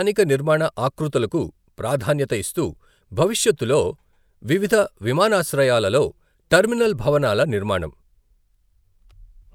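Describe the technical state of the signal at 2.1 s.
At 2.1 s the speech signal is intact, with no audible fault at that moment.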